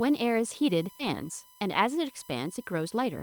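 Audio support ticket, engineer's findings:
USB whine throughout. Steady 1 kHz tone, about 25 dB below the speech. Probable component: USB audio interface or its power/ground path. The bus's 1 ms frame activity draws current in bursts, which couples into the analogue side as a fixed-pitch tone.

Skip ahead at 0.99–1.01 s. Abrupt forward jump with no gap. Roughly 0.7 s of speech missing, and the two sides are joined almost directly. Probable component: network path or an overflowing jitter buffer. Late-waiting audio was discarded, cutting delay by about the same amount.

Jitter buffer speed-up from 1.13 to 3.18 s. Speech runs at 108% speed with pitch unchanged and sounds hurried. Probable component: receiver jitter buffer. It held excess audio and trimmed short pitch-period chunks repeatedly, about 0.15 s in total, to pull latency back down.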